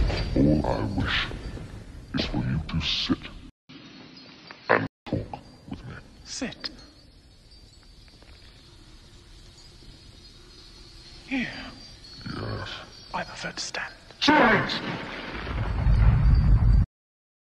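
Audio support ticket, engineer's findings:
Sound goes dull and boxy at 3.50 s, clearing again at 5.07 s. Short dropout of about 0.2 s at the switch. Nothing above 5.9 kHz in that stretch, level shifts by a few dB, faint new noise floor well under the signal. Likely cause: input switched to a poorer device mid-recording, its narrower band, different tone and own noise replacing the original path until it switched back.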